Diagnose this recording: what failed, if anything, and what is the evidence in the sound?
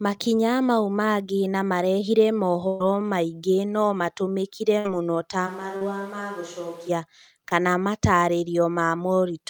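Network packet loss in bursts: at 2.67 to 2.81 s about 130 ms went missing and at 4.79 to 4.86 s about 60 ms, each filled by the last sound held and fading before playback skips ahead.

At the capture end, the close microphone apparently dropped out between 5.49 and 6.88 s, likely leaving a distant microphone: the speech turns abruptly roomy and hollow, roughly 5 dB quieter, with room noise about 25 dB below it.

Short concealed packet loss on the network path, at 5.77 s for about 40 ms and at 7.49 s for about 20 ms: the decoder extrapolates over each hole, leaving a brief smear or wobble.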